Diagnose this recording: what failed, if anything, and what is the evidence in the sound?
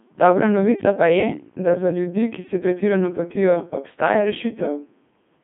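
Throughout the clip the speech sounds robotic and buzzy, with a narrow band from about 150 Hz to 3.5 kHz. This is the Codec 2 vocoder at the codec stage. The decoder rebuilds speech from sine waves using only pitch, voicing and envelope, and the heavy damage fits roughly 2.4 kbit/s.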